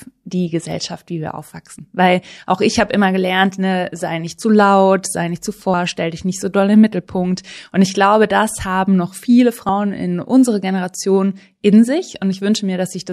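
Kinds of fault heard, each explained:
Audio missing between chunks: at 1.79 s, just after "wie wir", the speech skips forward. Around 50 ms of sound is gone, and the audio on either side is butted together with no gap of silence, so the speech seems to jump. The likely cause is a recorder or processor working in blocks that drops a short piece while it closes one block and opens the next; the timing would fit blocks of about 4 seconds.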